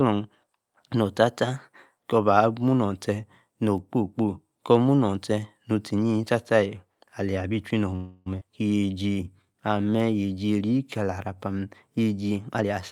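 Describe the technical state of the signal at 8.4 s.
At 8.40 s the speech lurches forward: about a fifth of a second of audio vanishes, and the two sides are stitched together across a join lasting to 8.43 s, with only a brief sliver of fill bridging it, so the flow jumps abruptly rather than pausing. This is a skip ahead. A chunk of audio was discarded, in transit or by an overflowing jitter buffer, while later audio was already queued, cutting playback delay by roughly 150 ms.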